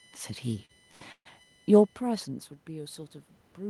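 A USB whine sits under the whole thing, a fixed 1 kHz tone strongest at 3 kHz, about 40 dB down, bus current leaking through power or ground.

At 0.65 to 0.71 s and again at 0.91 to 1.02 s there's a short stall from a late packet: the jitter buffer ran dry, the last sound got stretched 40 ms then 86 ms, and nothing was lost.

Then 1.12 to 1.27 s is a call audio freeze. It's a 134 ms hold that decays into about 70 ms of silence before picking up where it stopped, likely packets delayed in transit.

From 2.66 s to the end there's automatic gain rising. After the talker moves around 2.0 s, the input drops about 18 dB, and the AGC slowly lifts voice and background together.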